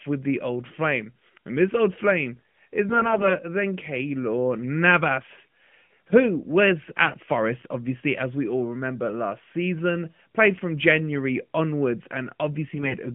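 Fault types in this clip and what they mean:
AMR bit errors: flipped low-priority bits in AMR frames misplace the excitation pulses and skew gain, so the speech turns hoarse and gargly in three bursts.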